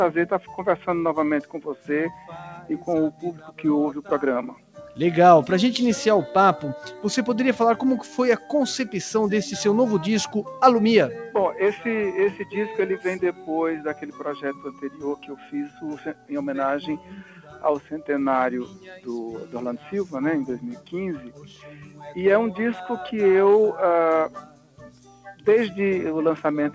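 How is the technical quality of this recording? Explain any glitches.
The quality is hurt by a speech-tuned noise suppressor, though the band-limiting at 8 kHz simply fits a G.722 call path.

Noise suppressor applied to music or sounds: it stays on throughout, mistaking sustained sound for noise, so levels swing by roughly 10 dB and the audio pumps and thins.

Sound cut by the noise suppressor: held or fading material sinks at 0.40–0.88 s, 1.43–4.98 s, 8.05–8.50 s, 13.33–16.31 s, 16.98–17.92 s, 18.65–20.13 s, 20.75–22.11 s and 24.34–25.47 s. Drops reach about 6 to 11 dB, and tails get clipped short.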